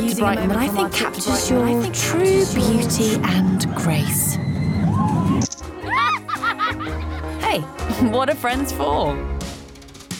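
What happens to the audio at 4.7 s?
Nothing goes wrong at 4.7 s: the audio there plays through intact, with no dropout, click or distortion.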